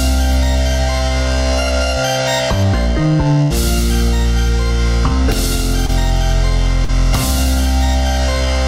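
A recording of everyday sounds. From 3.41 to 3.52 s the audio stalls into a sustained tail that fades away, either a held buzz or a dying hiss, then jumps ahead. This is a burst of packet loss: about 90 ms was filled by extending and attenuating the last received sound, and the 80 ms between was lost. Shorter smears or wobbles appear at 5.86 to 5.90 s and 6.84 to 6.90 s, where a brief event could vanish entirely. These are short concealed packet loss, where 21 ms and 38 ms were patched by continuing the preceding sound before blending back, replacing 20 ms and 40 ms of missing audio.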